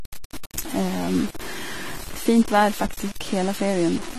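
Throughout the speech, quiet passages turn gritty and granular, with error noise sitting about 15 dB below the signal and tracking it. This is low bit depth without dither, likely from truncation to around 5 bits, so each sample snaps to coarse steps with no noise to smooth them.

Also present for the whole clip is plainly audible AAC compression: nothing remains above 14.1 kHz, and the codec's quantisation leaves the sound dull and smeared, with warbling and fizz on sibilants. The damage likely reflects AAC-LC at a low rate, consistent with 32 kbps.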